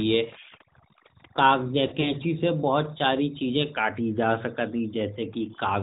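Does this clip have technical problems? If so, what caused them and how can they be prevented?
Yes. Overdone noise removal runs through the whole clip. The reduction was set so aggressively that bands near the noise estimate are pulled almost to nothing, taking quiet parts of the speech with them. The background becomes near-silent with twinkling specks. On a spectrogram, the gaps between phrases are dark with isolated flickering dots, and the harmonics look ragged. Using gentler reduction settings would prevent this.

The AMR narrowband mobile codec also affects the entire clip. It passes nothing above 4 kHz and rebuilds the voice from a vocal-tract model and a few excitation pulses, so the speech sounds plainly buzzy and synthetic. The damage fits a mid-rate mode around 10 kbps. A spectrogram shows a hard ceiling at 4 kHz. Routing calls over wideband or higher-rate codecs would prevent this.

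Lost AMR speech frames occur between 1.88 and 2.14 s. Frames failing their checksum were replaced by stretched, decaying copies of the last good pitch and spectrum, about 60 ms in total, scattered over 160 ms, with the longest run 40 ms. The sound smears, dips and warbles, then returns rough. The waveform shows brief fading notches. A stronger radio link or error protection would prevent this.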